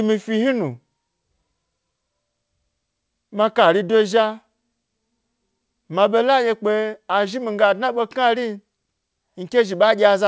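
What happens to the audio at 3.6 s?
Nothing goes wrong at 3.6 s: the speech passes through intact, with the call path's usual band limit leaving nothing above about 8 kHz.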